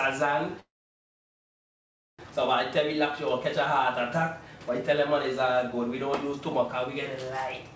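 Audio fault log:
0.60–2.21 s, call audio freeze: packets were likely held up in transit, draining the jitter buffer. The receiver briefly extended the last sound, then went silent for about 1.5 s. Playback resumed where it stopped, so nothing is missing but everything afterwards runs 1.59 s late.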